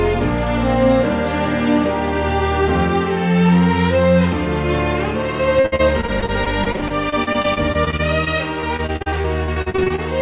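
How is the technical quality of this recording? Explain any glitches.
The recording has a fault in its second half. It passed through a call path, with nothing above 4 kHz, which fits a G.711 codec.

From 5.6 to 10.0 s there is repeated packet loss, giving a robotic sound. Many short gaps, up to 57 ms, are patched by repeating earlier sound. Roughly a fifth of that stretch is concealed, and it sounds choppy.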